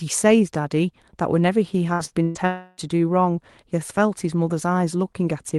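At 1.93 to 2.02 s, 2.05 to 2.14 s and 2.23 to 2.38 s the speech hits bursts of packet loss. Each gap is filled by the receiver stretching the last sound, heard as a brief held sound that fades. About 60, 60 and 120 ms of speech are skipped. On a spectrogram these show as smeared, repeated bands with abrupt jumps at each resumption.

From 2.47 to 2.80 s comes a longer break, likely a long network dropout. About 300 ms of audio is missing, and concealment fills the whole stretch with a fading continuation of the last sound that decays toward near-silence. The waveform shows a tapering envelope, and the spectrogram shows a blurred, weakening smear before speech cuts back in.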